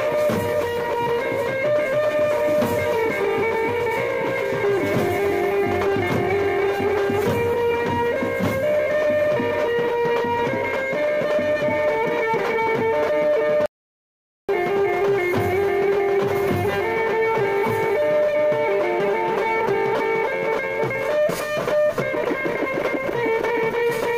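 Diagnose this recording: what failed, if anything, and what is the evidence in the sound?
An audio dropout to silence runs from 13.66 to 14.49 s, about 0.83 s of sound lost. Sound cuts off abruptly and resumes mid-flow, and the gap is silent with no room tone. A noise gate would leave decaying tails. Likely an input-side link or device loss.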